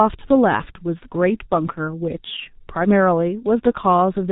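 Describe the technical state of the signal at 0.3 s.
At 0.3 s you're hearing the G.723.1 codec, which runs right through the clip. It packs speech into 30 ms frames with a slowly updated voice model and nothing above 4 kHz, which fits a roughly 6 kbit/s coder. The damage is heavy: muffled, hoarse speech with smeared consonants.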